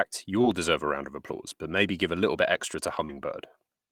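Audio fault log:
0.41–0.45 s and 3.05–3.11 s, short concealed packet loss: a brief smear or wobble, just before "deserve a round of" and just after "little bit extra to". About 20 ms and 40 ms of audio arrived too late, and the receiver filled most of each gap by extending the preceding sound before blending back.
0.43–0.45 s and 3.09–3.11 s, lost packet rebuilt from error correction: the last 20 ms of each dropout sounds rougher and noisier rather than silent. A single lost packet was replaced each time by the low-bitrate backup copy carried in the following packet.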